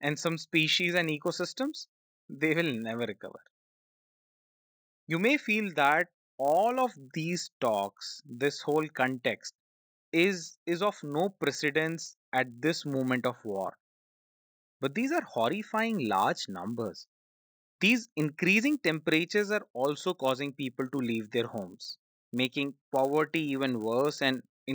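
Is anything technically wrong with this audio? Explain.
Yes. Throughout, the resampler restarted on every block, converting each 10 ms block on its own (the audio suggests 16 kHz to 48 kHz), so every edge errs, producing a 100 Hz buzz under the speech.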